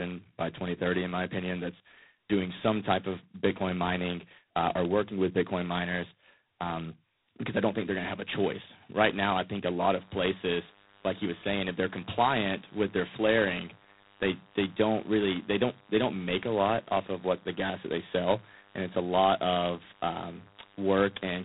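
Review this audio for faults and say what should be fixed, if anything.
The whole clip has been through G.726 ADPCM at 16 kbit/s. At two bits per sample the prediction error is coarsely quantised, so a harsh, rasping hiss rides along with the speech level, and nothing above 3.9 kHz survives. Keep the call path at 32 kbit/s or use a wideband codec.

From 9.90 s to the end there's DECT cordless phone buzz, a steady, thin 100 Hz drone full of harmonics, roughly 30 dB under the speech. A nearby handset or base is bursting every 10 ms and the audio circuitry is rectifying it. Move the DECT base away from the recording gear and use shielded cabling.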